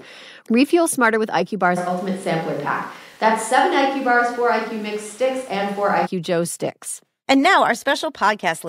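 From 1.79 s to 6.05 s the speech turns abruptly roomy and hollow, with thinner bass, then snaps back just as suddenly. Likely a switch to a distant microphone. Level holds steady, while room noise rises to roughly 30 dB below the speech.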